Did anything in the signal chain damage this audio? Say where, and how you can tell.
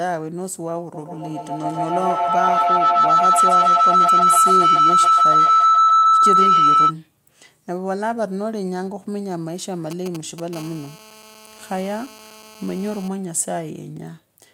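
Yes. From 0.94 to 6.97 s a feedback howl near 1.5 kHz swells to about 10 dB above the speech, pulsing every 150 ms or so: two devices in one room form a loop that gains on every trip.

From 9.91 to 10.55 s, GSM signalling bursts give galloping ticks and short 217 Hz buzzes, about 10 dB down. The analogue wiring is rectifying a nearby 2G phone's radio bursts.

From 10.56 to 13.08 s, a steady, raspy 217 Hz GSM phone buzz, about 17 dB below the speech, shows that the phone's call transmission is rectified in the same analogue path.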